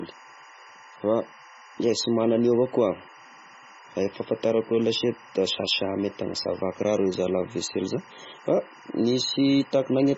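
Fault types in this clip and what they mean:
Timecode bleed: a steady chirping warble alternating near 1 and 2 kHz sits roughly 25 dB under the speech, its pattern matching 24-frame-per-second linear timecode leaking in.
MP3 compression: heavy watery, swirling artefacts and nothing above 7.6 kHz, likely from MP3 encoding at a very low bitrate, around 16 kbps.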